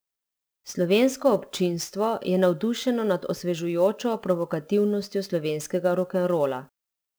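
Sample clock jitter runs through the whole clip. The converter's clock wanders by something like ten microseconds, so each sample is captured a little early or late. Where the speech waveform changes fastest, that timing slip becomes an amplitude error, sitting roughly 25 dB below the signal. It comes across as a grainy hiss that clings to loud passages and sharp, bright consonants and falls away in the pauses.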